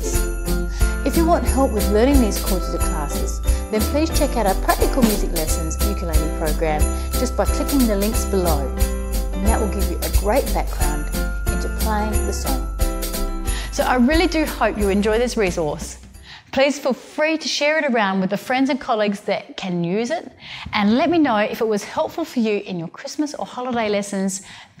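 No technical faults can be heard in this recording.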